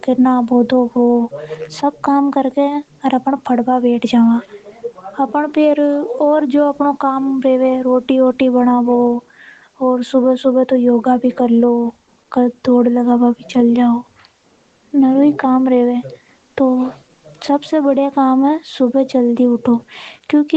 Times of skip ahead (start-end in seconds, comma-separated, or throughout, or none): none